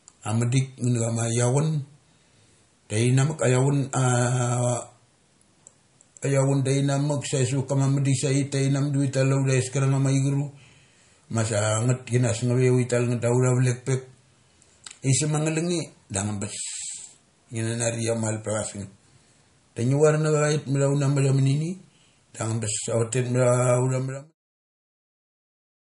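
From the start of the speech to its end, the audio shows plainly audible damage, likely from MP3 compression. Nothing is present above 10.6 kHz, where the encoder has cut the treble, and the sound has a watery, swirly quality as weak frequency components drop in and out between frames. S sounds chirp metallically and onsets smear. The degree of damage points to a low bitrate, around 40 kbps. The damage continues through the closing fade-out, which begins at about 23.5 s and ends at 24.35 s.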